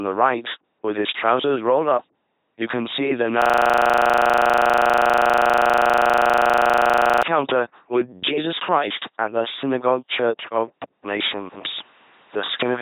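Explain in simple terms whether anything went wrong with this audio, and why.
Several things went wrong. Throughout the whole recording, the speech has been through an LPC-10 vocoder, a very low-quality military voice codec. It rebuilds the voice from a buzz or a hiss, so the speech sounds robotic and buzzy, and everything above about 3.8 kHz is missing.

From 3.42 to 7.23 s, right after "you can see the", there is a system hang loop. The computer froze while the sound hardware kept replaying the same 40 ms scrap of audio, about 95 times. Repeating 25 times a second, it comes out as a steady buzz.

At 10.84 s, after "the synagogue church of", the sound drops out for 200 ms. When it returns, the tone has changed and there is a faint new background noise. The loudness stays about the same. The likely cause is an input switched to a poorer device partway through the recording.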